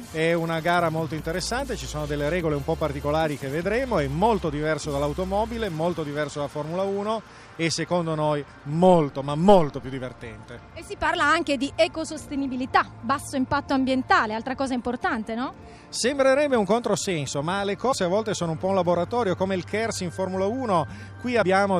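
At 17.91 s the audio jumps forward. Compressed frames were skipped, so about 70 ms of sound never plays. That fits roughly three frames of 26.1 ms each. It happens again from 21.41 to 21.43 s. This time about 50 ms is lost, which fits around two frames. Each gap is a whole number of frames.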